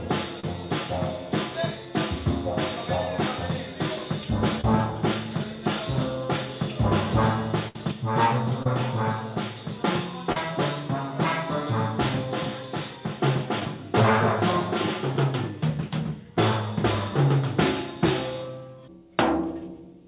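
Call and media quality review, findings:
Short concealed packet loss at 0.40, 4.61, 8.63, 10.32 and 13.60 s: brief smears or wobbles where the jitter buffer's concealment patched 10–33 ms gaps. Narrowband G.711-style path, nothing above 4 kHz.

Burst of packet loss, 7.68–7.76 s: about 60 ms gone. Concealment stretches and fades the last sound, then the audio jumps ahead with that chunk missing.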